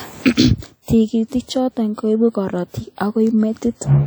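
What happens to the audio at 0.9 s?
Just before 0.9 s, from 0.82 to 0.88 s, a pre-echo smears the onset of a sharp speech attack. For about 59 ms a short hiss rises ahead of the transient, because the codec spread quantisation noise sized for the loud attack across the whole transform block, including the quiet stretch before it. The attack sounds softened and blurred. A spectrogram shows a thin broadband haze leading into the onset, and the waveform shows low-level fuzz where there should be near-silence.

Around that moment the whole clip carries a ringing, washy character with hiss that breathes along with the speech. This is most likely WMA compression. The long transform blocks smear noise over tens of milliseconds, and weak spectral detail drops out, which fits a low bitrate around 48 kbps. On a spectrogram, faint components appear patchy and gappy, and nothing shows above 20.1 kHz.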